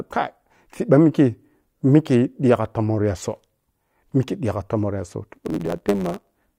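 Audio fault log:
5.33 to 6.58 s: block size mismatch (truncated). Each block's end is cut, causing a 100 Hz buzz. Speech runs 1.07 times faster at near-normal pitch, fitting 512-sample blocks.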